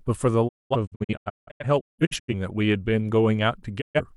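Speech with a digital broadcast dropout: the receiver lost good frames and muted, so from 0.47 to 2.34 s the sound breaks into short holes, the longest 0.21 s, with 20 ms fades. A brief 0.13 s mute follows at 3.80 to 4.01 s.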